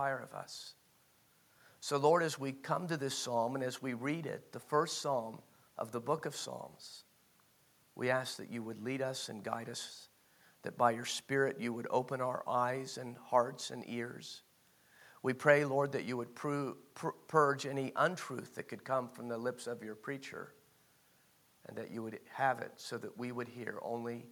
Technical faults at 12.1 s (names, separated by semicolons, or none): none